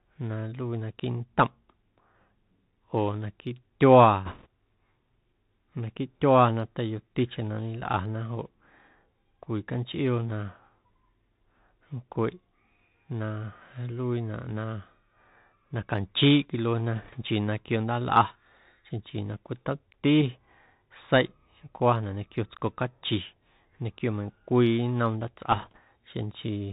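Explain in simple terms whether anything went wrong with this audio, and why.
The whole recording went through a Bluetooth CVSD headset codec, the narrowband format used by headset calls. It keeps nothing above 4 kHz, so the speech sounds muffled and phone-like, s sounds come out scratchy, and a grainy hiss sits underneath throughout.

There are also three short bursts of bit errors on the Bluetooth voice link, at 4.25 to 4.46 s, 16.96 to 17.17 s and 25.52 to 25.79 s. Flipped bits add a rushing crackle rather than sharp clicks. The first burst is roughest, and the later ones are progressively milder.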